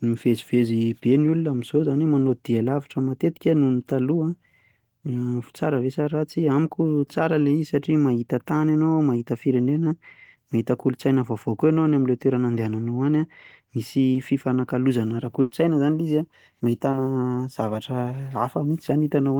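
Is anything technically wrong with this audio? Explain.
Yes, the speech has two kinds of network dropout.

At 14.13–14.17 s and 16.91–16.95 s, a brief smear or wobble is heard. This is short concealed packet loss: about 20 ms never arrived in time, so the receiver extended the preceding sound to bridge the gap before rejoining the real audio.

At 15.41–15.53 s, the sound briefly freezes into a held, fading tail and then jumps ahead. This is a burst of packet loss: about 100 ms was lost and filled by continuing the last sound at decreasing level, with no silence, so that stretch of speech is missing.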